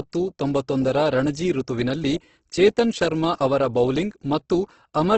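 Right from the start and all the way through, the speech sounds rough and grainy, and nothing gets through above about 8.2 kHz, so the top end feels lopped off. That's likely Opus compression in its CELT music mode, pushed hard at a bitrate somewhere around 12 kbps. Starved of bits, the encoder keeps each band's overall energy but fills in the detail with folded or noise content, so the voiced parts come out heavily noisy and harsh rather than swirly.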